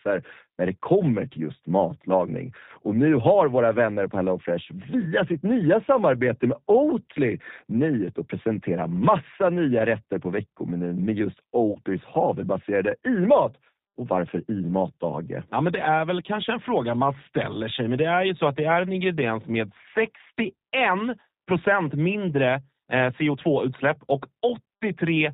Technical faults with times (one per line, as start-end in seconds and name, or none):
0.00-25.33 G.729 codec
11.72-11.78 VoIP packet loss concealed by the speech codec